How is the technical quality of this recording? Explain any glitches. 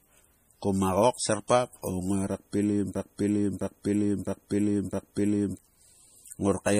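The quality is pretty rough, with two problems.

Throughout the clip the speech has a watery, swirly texture, and sibilants come out metallic and chirpy. Nothing gets through above 15.3 kHz. That's most likely MP3 compression starved of bits, which fits a low bitrate of around 40 kbps. When the encoder runs short, it chops the treble at a fixed point and drops quiet frequency lines, and those lines flicker on and off from frame to frame. That flicker is the swirl you hear, and it's plainly audible here.

From 2.95 s to 5.59 s there's a broken-record loop. A chunk about 0.66 s long plays four times back to back, identical each time. The likely cause is a stall somewhere in the player, encoder or stream, which kept pushing out the last fragment it had buffered. Whatever should have played in those 2.6 seconds is gone.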